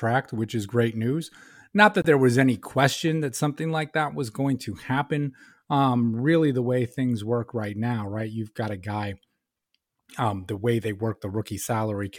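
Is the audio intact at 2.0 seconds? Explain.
No. A Bluetooth dropout silences the speech from 2.02 to 2.06 s, a gap of about 23 ms that fits a single lost frame. The likely cause is packets reaching the headphones too late and being dropped, leaving a hole with abrupt or briefly faded edges before the sound resumes as though it had kept playing.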